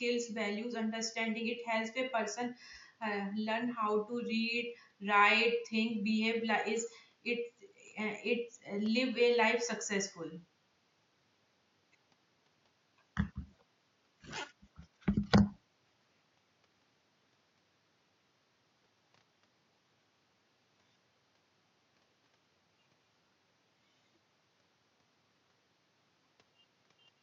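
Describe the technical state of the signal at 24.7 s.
At 24.7 s the signal is intact, with only the room's own background noise sitting about 40 dB below the speech.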